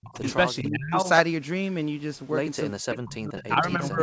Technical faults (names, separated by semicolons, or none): speech suppressed in double talk; echo leak